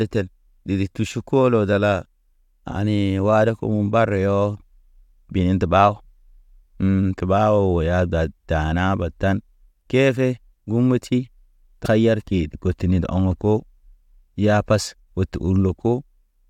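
At 11.84 to 11.86 s there is damaged data in the compressed stream: part of the encoded speech is corrupt, so the decoder misreads those frames, loses sync and hunts for the next valid frame header. It comes through as a brief glitch. On a spectrogram it shows as a thin vertical smear of broadband energy unrelated to the surrounding harmonics. The waveform has a ragged discontinuity there. The same fault returns at 14.86 to 14.88 s with the same brief glitch and smeared stripe.

Between them, at 12.27 s, a repeated buffer appears. New audio arrived late, so the device replayed its last block, a 2.67 ms chunk that points to a 128-sample buffer, twice more. Because each repeat is so short, it comes across as a tiny click or buzz rather than a stutter, and only a few milliseconds of audio go missing. The waveform shows three identical short segments with hard joins. The spectrogram shows a narrow vertical tick.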